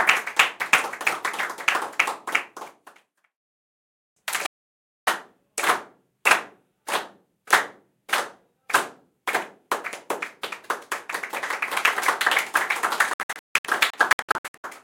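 Digital broadcast dropout at 4.46 to 5.08 s, and again from 13.14 to 14.64 s. The receiver muted when frames went bad, so the sound cuts out: one 0.61 s hole, then 0.77 s lost in short gaps of at most 0.16 s each.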